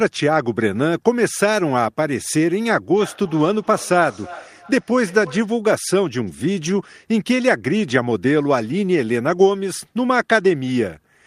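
From 2.93 to 5.59 s there is feedback echo between two devices: a second device in the room replays this microphone's speech, which is picked up again and escapes echo cancellation. Each word returns roughly every 0.3 s, thinner and ringing, peaking about 18 dB below the speech.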